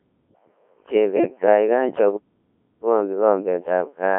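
Codec 2 vocoder damage runs through this whole speech clip. The voice sounds robotic and buzzy, and its sound fits the heavy coarseness of a 1.3 kbit/s mode. The band is confined to about 300 Hz to 3.5 kHz. The decoder does not carry the original waveform. It rebuilds the voice from sine waves driven only by pitch, voicing, energy and a rough spectral envelope, so natural texture is lost. Bit errors on digital voice radio strike from 1.16 to 1.46 s. The error rate there is high, several percent of bits flipped. In a vocoder this sparse, each corrupted bit can wrongly set a whole frame's pitch, level, voicing or spectral shape. Across these few frames the synthetic voice lurches in pitch and loudness, its tone colour shifts abruptly, and it breaks into warbling, bleepy, robotic gibberish before clean decoding resumes.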